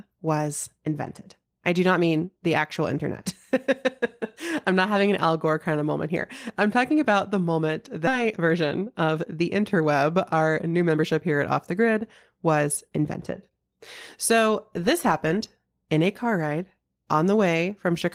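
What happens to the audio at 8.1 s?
Just after "talking about the moment", speech jumps forward at 8.07 to 8.09 s, losing about 0.7 s. This is a skip ahead: a stretch was dropped while later audio was already queued. From 8.18 to 11.04 s, ending before "here at", the speech runs hurried at 108% with unchanged pitch. This is a jitter buffer speed-up, trimming repeated pitch-period slices, about a third of a second in total.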